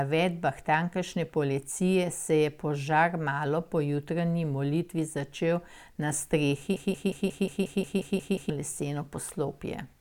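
At 6.76 s the speech locks into a broken-record loop. A 179 ms fragment repeats exactly, back to back, ten times until 8.50 s, producing a mechanical stutter at about 5.6 repetitions per second. The likely cause is a stalled player or stream resending the last piece it held, so the speech due in that stretch is lost. A spectrogram shows one identical pattern tiled across the span, and the waveform shows the same block copied end to end.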